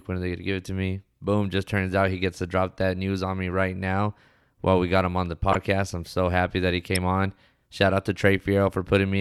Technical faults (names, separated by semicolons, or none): corrupt frame decoded